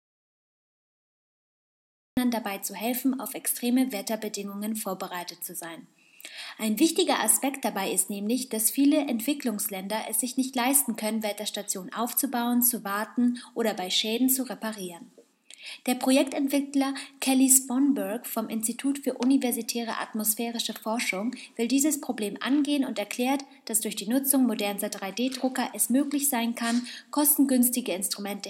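An audio dropout to silence runs from the very start to 2.17 s: the clip opens in silence with no room tone, and the sound then arrives mid-flow. This is likely the input lost and the recorder writing silence until the signal returned.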